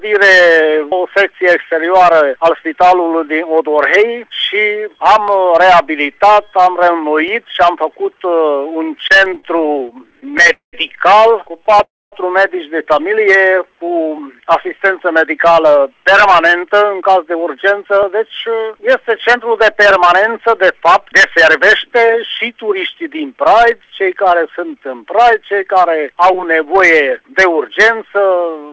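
From about 1.3 s to 27.7 s there's a regular click every 2 s, around fifteen in all. That's likely clock drift buffer slips, with mismatched clocks (something like 200 ppm apart) forcing a small block of samples to drop or repeat.

Between 8.98 s and 13.46 s come scattered short gaps: roughly thirty tiny holes, none longer than about 30 ms, patched by stretching the last sound, so you hear brief ticks and smears.

At 10.53 to 10.75 s there's what's likely a call audio freeze. The buffer ran dry, the last sound carried on as a fading buzz or hiss and then went quiet for about 120 ms, and playback resumed about 200 ms later than before.

From 11.59 to 14.46 s a jitter buffer slow-down repeats pitch periods to rebuild reserve. The audio plays at about 96% speed with the same pitch, drawn out, adding about 132 ms.

Inside that, at 11.83 to 12.14 s, a second freeze, again likely caused by late packets, fades to roughly 230 ms of silence and adds about 290 ms of delay.

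Then from 16.08 to 23.24 s a jitter buffer speed-up trims pitch periods to cut the delay. The audio runs about 7% fast and sounds hurried, losing around half a second.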